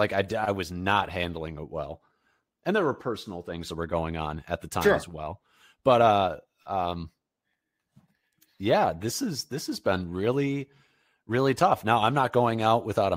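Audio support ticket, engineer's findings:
Listened to the whole speech clip and found nothing to flag, so no fault to log here.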